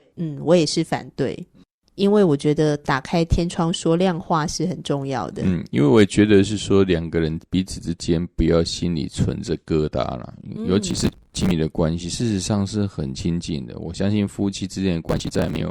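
Processor overload crackle breaks into this speech clip twice, from 10.91 to 11.51 s and again from 15.09 to 15.61 s near the end. In both bursts the processor falls behind and misses buffer deadlines over and over. The buffers look to be around 5 ms long, and each missed one is skipped outright instead of held. The result is a quick string of hard-edged gaps that sounds like gritty tearing over the audio, around a hundred skips in the first burst and somewhat fewer in the second. It stops as soon as the load eases.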